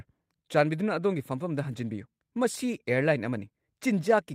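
Nothing stood out on listening to this speech clip.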